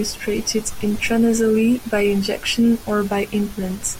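Listening closely to the speech, nothing stood out as a technical problem at any point.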